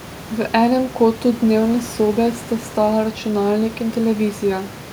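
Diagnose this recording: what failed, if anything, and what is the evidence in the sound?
Nothing failed in this recording.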